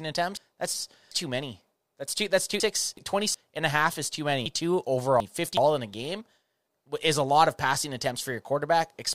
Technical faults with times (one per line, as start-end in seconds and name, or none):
0.37-1.11 chunks out of order
2.60-3.34 chunks out of order
4.46-5.57 chunks out of order